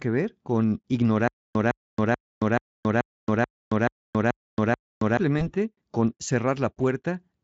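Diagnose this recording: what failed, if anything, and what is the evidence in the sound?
From 1.28 s to 5.17 s the speech stutters with silent gaps. A 158 ms burst plays nine times, each followed by 275 ms of digital silence. The likely cause is a stalled playback stream replaying its last fragment at each retry. The audio in between is lost.

Between 5.39 s and 5.50 s there is VoIP packet loss concealed by the speech codec. The dropout fits one lost 20 ms frame on the network. The Speex decoder, lightly coloured elsewhere, extrapolates across it, stretching the sound as it fades. The sound stays weakened until it recovers near 5.50 s.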